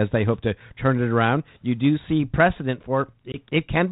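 Right after "you do see precedent", at 3.32 s, the speech drops into a sharp-edged gap and comes back with brief distortion, settling by 3.37 s. This is packet loss on an ADPCM call: about one 20 ms packet vanished from the 32 kbit/s G.726 stream, and the decoder's predictor and step size lost track of the sender's until they resynchronised.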